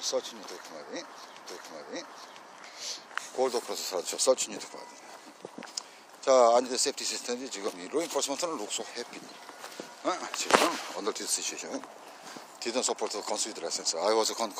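At 1.45 s a stream segment is repeated. The player queued the same chunk twice, so about one second replays, ending at 2.45 s, with a slight blip at the jump back.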